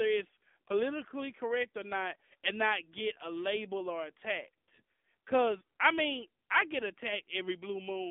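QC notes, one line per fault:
Throughout: AMR narrowband mobile codec. The speech is confined to a phone band of about 250 Hz to 3.5 kHz, with nothing above 3.6 kHz. A vocal-tract model driven by sparse pulses gives a plainly buzzy, synthetic edge, which fits a low rate near 7.4 kbps.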